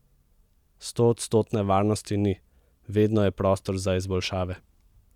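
No faults turn up anywhere in this speech clip, so there's nothing here to trace or explain.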